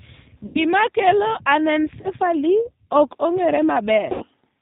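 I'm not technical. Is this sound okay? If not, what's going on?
No. Throughout, the speech has the slightly rough, synthetic, muffled quality of the G.729 codec, a low-bandwidth phone codec that rebuilds the voice from a simplified model and cuts everything above 4 kHz. Unlike a brief glitch, this colouring never lets up.

There are three short breaks from VoIP packet loss concealed by the speech codec: at about 0.46 to 0.65 s, 2.01 to 2.10 s, and 4.12 to 4.25 s, just after "ok ong'ere". Instead of going silent, the gap is filled with a buzzy or noisy, fading stretch of the previous sound, and the voice stays weak for a moment afterwards.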